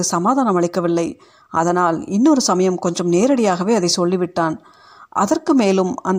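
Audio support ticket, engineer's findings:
No audible fault found in the speech clip. No component flagged; no action required.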